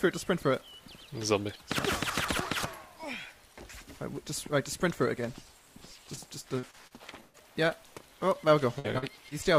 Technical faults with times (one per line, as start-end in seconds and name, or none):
6.15-6.19 short concealed packet loss
6.59-7.73 repeated packet loss (robotic sound)
8.79-8.86 burst of packet loss
8.98-9.33 short concealed packet loss